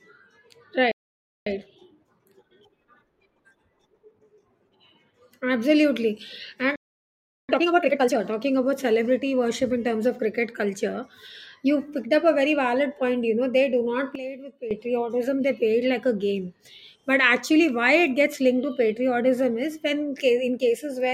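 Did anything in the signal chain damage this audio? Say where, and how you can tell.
Yes. Two playback stalls occur: the speech cuts to silence at 0.91 s for about 0.55 s and again at 6.76 s for about 0.73 s, then resumes. This points to the player or buffer stage, most likely a buffer underrun or a blocked playback thread.

Each stall is followed by time-compressed catch-up at the playback stage. From 1.47 to 4.47 s the speech runs at 1.1 times normal speed, and from 7.49 to 8.21 s, just before "talking about celebrity worship", at 2 times. Pitch stays normal because the player removes and cross-fades short segments to work off its backlog.

A sudden gain jump follows "know they do not" at 14.15 s. Speech and background noise drop together by about 12 dB in one step until 14.71 s, with no fade. That points to a digital gain change applied without a ramp, probably in call processing or the playback mixer.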